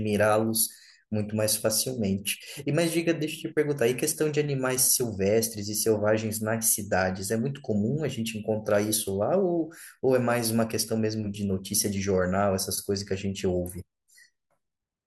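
No audible technical faults.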